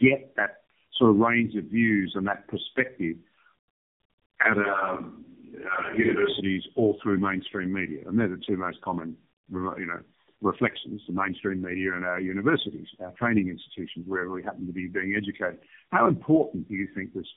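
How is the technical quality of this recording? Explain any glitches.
Quality is poor throughout because of tandem speech coding. The speech went through three low-rate speech coders in a row, each re-encoding the previous one's damaged output. Nothing survives above 3.8 kHz. The result is rough, muffled and warbly, which fits stacked narrowband speech codecs.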